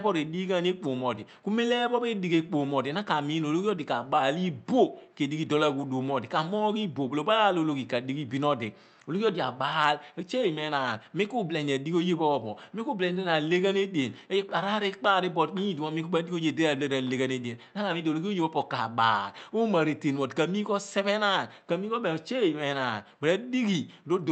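No technical faults are audible.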